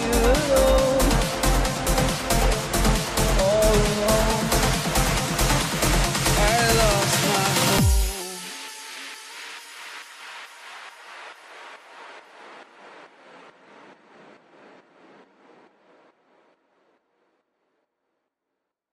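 From 8.2 s to 9.31 s the sound slows by 6 percent and drops about 107 cents, roughly a semitone flat, then snaps back to normal rate and pitch. This is likely a drift correction step, where clock-matching software shifted playback rate in one step to manage its buffer.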